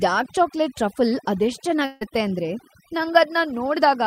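From the very start, this speech has overdone noise removal running the whole way through. The suppressor was pushed too hard, so any frequency band it judged to be close to the noise floor got pulled way down or shut off completely. Quieter parts of the voice got caught up in that as well. You end up with a background that drops away and breaks up into little twinkling specks.

Then at 1.85 s there's a gap running to about 2.03 s, and it sounds like a long network dropout is the likely cause. For roughly 155 ms the receiver keeps smearing the last bit of sound forward as a fading buzzy fill instead of real audio. There's never any true silence. When the speech picks up again, about 160 ms of the original just isn't there, so it jumps ahead.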